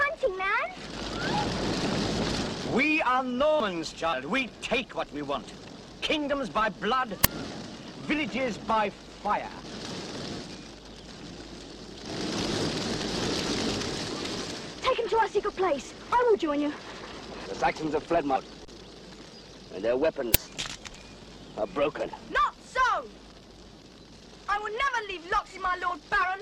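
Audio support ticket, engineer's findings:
Brief blip or click with a forward jump in the audio at 1.33, 4.12 and 12.52 s (about 0.1 s lost each), 18.35 s (about 0.2 s) and 20.46 s (about 0.15 s). Compressed frames skipped: decoder missing or rejecting a handful of frames, consistent with 24 ms frames.

Short crack at 7.24 and 20.34 s, each about 5.33 ms long. Uninitialised buffer: playback read a block before audio was written to it, so leftover memory came out as samples. The length fits a 256-sample block.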